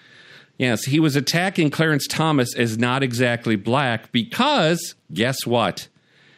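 No technical faults can be heard anywhere in the speech.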